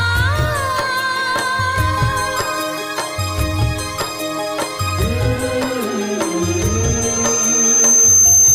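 At 5.90 s, loudspeaker feedback squeal begins. A 6.3 kHz tone swells over about two seconds to roughly 10 dB above the sound, running to the end.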